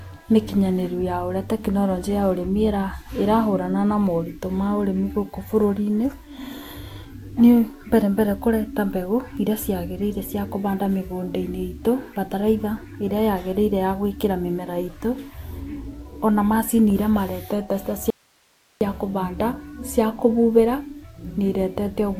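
At 18.10 s, right after "macĩnĩ ĩrĩa maretete ta", the speech cuts abruptly to an audio dropout to a faint residue, leaving about 0.71 s of hiss some 40 dB below the signal until "kũbanda cia kũbubera". The likely cause is a lost feed into a still-live path. Unlike a pause or fade, the edges are instant and the gap is noise, not silence.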